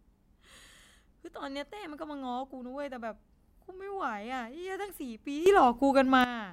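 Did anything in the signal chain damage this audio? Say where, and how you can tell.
Yes. A sudden gain jump from 5.46 to 6.24 s raises speech and background noise together by about 12 dB in a single step, then drops back. An automatic gain control would ramp. This instant step likely comes from a digital gain setting applied without smoothing.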